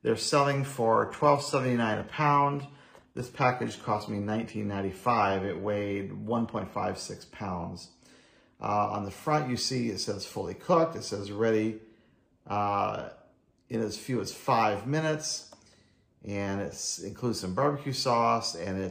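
From 0.85 to 6.85 s the audio drops to an adaptive stream at a lower bitrate: treble thins, with nothing above 14.9 kHz, fitting a switch from 96 kbit/s AAC to 20 kbit/s HE-AAC. Unlike packet loss, the quality changes abruptly with no gap or dropout.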